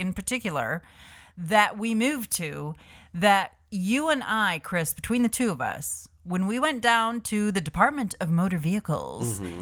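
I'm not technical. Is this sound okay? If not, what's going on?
Yes, no technical faults are audible anywhere in this speech recording.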